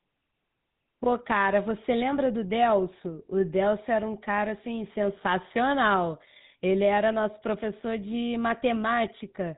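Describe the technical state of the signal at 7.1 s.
At 7.1 s the speech carries GSM full-rate codec damage, present across the whole clip. The vocal tract is modelled and driven by sparse regular pulses, giving a buzzy, gravelly roughness at a rate that fits 13 kbps. Nothing passes above 3.8 kHz. Plain band-limiting would muffle without that grit.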